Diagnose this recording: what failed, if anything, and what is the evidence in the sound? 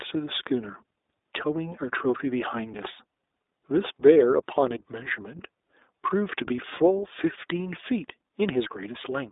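The failure is at the codec stage: the speech has passed through iLBC from start to finish. The band runs from about 300 Hz to 3.7 kHz, with nothing above 3.8 kHz, and the voice sounds plainly rough and slightly synthetic. A clean telephone-band filter or G.711 would sound narrow but natural. The graininess here comes from coding each frame's excitation independently, which fits 20 ms frames at 15.2 kbps.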